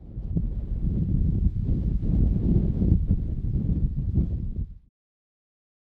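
No technical faults can be heard anywhere in this recording of sounds. Nothing in the audio points to a dropout, distortion or any other problem in the chain that captured and delivered it.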